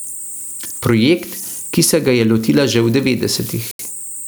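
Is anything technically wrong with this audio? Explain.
Yes, there are three problems.

Converter idle tones run through the whole clip: a high whistle around 10 kHz and a grainy hiss under the quieter speech, about 23 dB below the signal. A delta-sigma converter working without dither settles into repeating bit patterns on small inputs, and those patterns produce this tone.

Gain pumping is also present from start to finish. The gain swings by around 10 dB, and the dynamics sound squashed. The likely cause is gain set far too high for the microphone, with a fast limiter or compressor clamping down on every peak.

A Bluetooth stall appears at 3.71 s. The sound drops out completely for 80 ms and resumes at 3.79 s. This is likely interference delaying packets until the headphones' buffer ran empty, so playback halted until the resent packets arrived.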